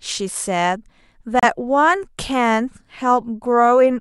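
At about 1.40 s the speech stops dead for roughly 33 ms and resumes at 1.44 s, a Bluetooth stall. The likely cause is radio interference holding packets back long enough for the headphones' buffer to empty, so playback paused until retransmitted data arrived. Unlike a codec dropout, the gap is plain silence rather than a smeared, warbling patch of concealment.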